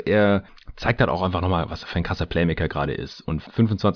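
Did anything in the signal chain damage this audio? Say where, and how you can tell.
No, nothing in the signal chain audibly damaged this speech recording: the signal holds steady throughout, with no point where any stage has left its mark on the sound.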